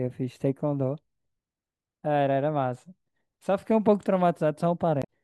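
A brief glitch breaks into this speech clip from 5.01 to 5.07 s, near the very end: damaged data in the compressed stream made the decoder misread frames and lose sync.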